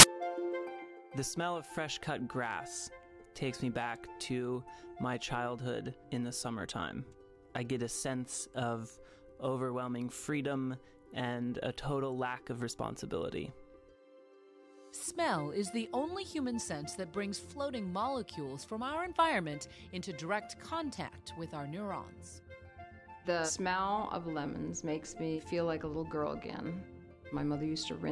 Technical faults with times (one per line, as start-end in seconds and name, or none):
0.00-0.03 file tags played as audio